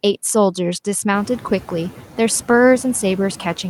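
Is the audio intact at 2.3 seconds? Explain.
No. Noise suppressor artifacts run through the whole clip, including 2.3 s. The suppressor pulls the steady background down by about 6 dB frame by frame, so the residual noise, louder since its rise near 1 s, pumps between and under the speech.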